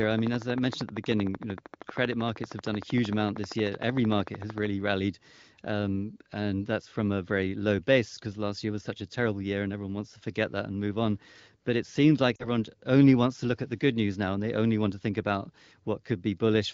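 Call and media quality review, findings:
Brief dip in the speech at 12.36–12.47 s, fading toward silence, then speech returning weak and rough for a moment. Lost AMR speech frames: about 40 ms missing, consistent with two 20 ms frames failing their checksum on the radio link. The AMR-WB decoder (HD Voice path, light codec coloration) repeats the last good pitch and vocal tract settings with falling gain, and wideband concealment fades quickly.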